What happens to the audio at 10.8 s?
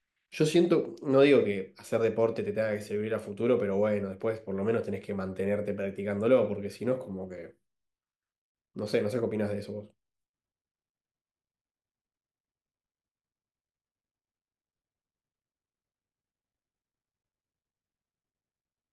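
Nothing goes wrong at 10.8 s; the speech carries on intact through that moment.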